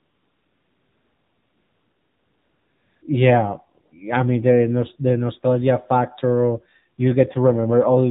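The speech passed through the AMR narrowband mobile codec at a low rate, consistent with the 7.4 kbps mode. Everything above 4 kHz is gone, and the voice sounds plainly buzzy and synthetic. From 0 to 3.02 s, and again briefly from 3.86 to 3.92 s, no speech frames were sent, so AMR comfort noise fills those gaps with a smooth, steady synthetic hiss that switches in and out.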